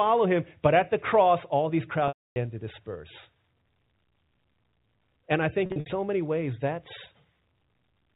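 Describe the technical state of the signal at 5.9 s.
A buzzy, briefly held sound with short dips runs from 5.66 to 5.86 s, just before "many ways that's". This is packet loss with pitch repetition: about 140 ms went missing across 200 ms, bridged by repeating the last pitch period.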